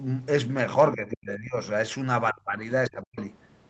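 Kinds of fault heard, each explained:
Speech suppressed in double talk: The talker's level sinks sharply three times, around 0.95 to 1.59 s, 2.32 to 2.53 s and 2.89 to 3.18 s, dropping by roughly 25 to 40 dB at worst. That's likely an echo canceller clamping down on both voices while both ends talked at once.
Other side's voice leaking through: Right after the last dip, from 3.18 to 3.26 s, a brief second voice slips in about 20 dB under the talker. It's likely far-end audio from the loudspeaker that the echo canceller didn't fully scrub from the mic.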